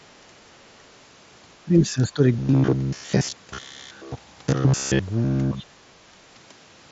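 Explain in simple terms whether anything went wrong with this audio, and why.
Two kinds of problem can be heard.

The speech drops away twice, from 1.63 to 2.21 s and from 5.5 to 5.75 s. This is speech suppressed in double talk. Both sides likely spoke at once. The echo canceller could not tell them apart, so it turned the talker down. The second dip is deeper.

From 2.39 to 4.99 s the voice turns into a stiff, metallic buzz near 67 Hz. This is robotic sound from repeated short buffers. New audio likely arrived too slowly. The software kept replaying a tiny slice of about 15 ms instead.

The Bluetooth mSBC headset link carries sound up to about 7.7 kHz, as that link is designed to.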